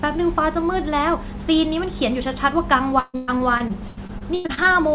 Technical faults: repeated packet loss (robotic sound)

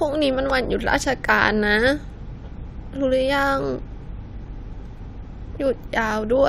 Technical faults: loud pop

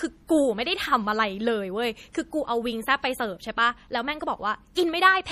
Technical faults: MP3 compression; pre-echo

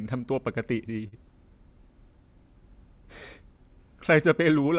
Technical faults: short stall from a late packet

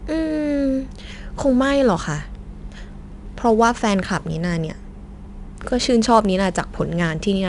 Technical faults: 4-bit ADPCM compression

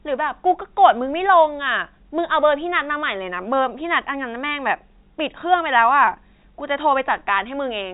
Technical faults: none

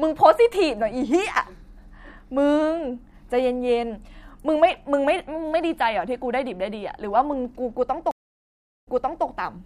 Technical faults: stream reconnect

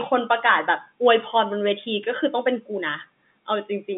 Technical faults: none

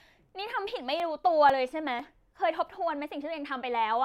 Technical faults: periodic USB or driver dropouts

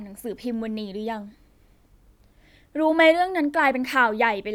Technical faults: none

